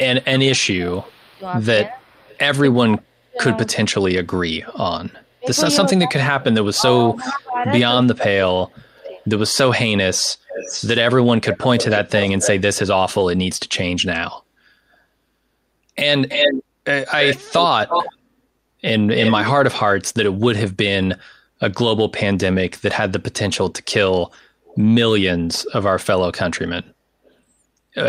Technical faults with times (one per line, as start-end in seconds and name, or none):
0.22-2.38 echo leak
0.38-9.00 speech suppressed in double talk
7.15-7.38 echo leak
8.98-12.50 echo leak
16.28-18.16 echo leak
19.17-19.49 echo leak
23.54-24.79 echo leak
27.25-27.33 echo leak